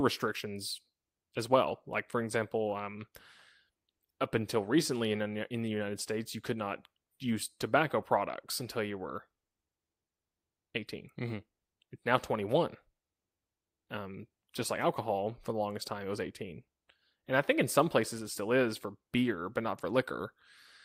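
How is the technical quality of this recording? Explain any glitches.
The technical quality of this recording is sound, with no glitches to explain.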